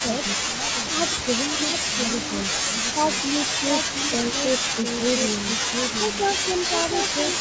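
Right from the start there's a doubled audio track: a second full-band copy trails about 0.7 s behind, roughly 5 dB down, most likely from a second, slower capture path. Then the speech suppressed in double talk shows up at 0.49 to 1.02 s, 1.54 to 1.73 s and 2.73 to 2.96 s, with short dips of about 5 dB, likely the echo canceller ducking while both sides talked at once.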